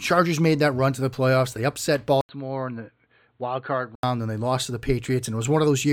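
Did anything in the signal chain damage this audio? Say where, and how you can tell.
Yes. From 2.21 s to 4.03 s the speech turns duller and quieter, by around 10 dB, with nothing above 4.4 kHz and a new, faint noise floor well below the signal. An 80 ms silence marks the switch. On a spectrogram the upper bands vanish abruptly across that span and return at 4.03 s, and the waveform visibly shrinks. This is likely an input switched to a poorer device at the driver stage, a narrower-band microphone briefly taking over.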